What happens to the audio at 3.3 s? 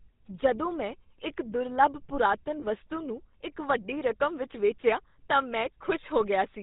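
At 3.3 s the speech is passing through GSM full-rate coding, as it does for the whole clip. The codec rebuilds the voice from a vocal-tract model driven by sparse, regularly spaced pulses, which fits a 13 kbps rate. The result is a plainly audible buzzy, gravelly roughness with nothing above 4 kHz. Simple band-limiting would only muffle the sound, without that grit.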